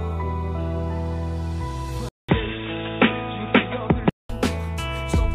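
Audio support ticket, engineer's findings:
Dull, boxy sound 2.09–4.29 s, nothing above 3.8 kHz, with a 0.2 s silence at the switch; different low background noise well under the signal, level roughly unchanged. Likely input switched to a poorer device with narrower band, then restored.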